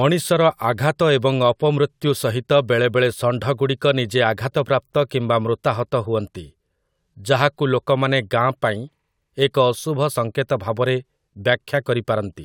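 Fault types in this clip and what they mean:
No faults detected in this speech recording.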